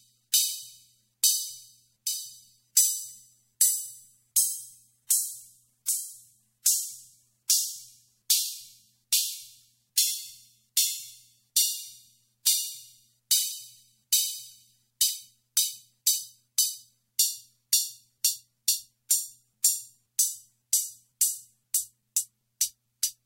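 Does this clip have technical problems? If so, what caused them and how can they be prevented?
Yes, there's pre-echo before sharp attacks at 0.32, 2.75, 5.09, 6.64, 7.48, 9.96, 19.09 and 19.62 s. Each time a short hiss of about 13 to 16 ms, roughly 23 to 30 dB above the quiet floor, leaks in ahead of the hit and softens it. That fits a transform codec holding one long block of about 26 ms without switching to short blocks, so noise meant for the loud attack spills backwards. To prevent it, encode with block switching enabled so transients get short windows, or at a higher bitrate.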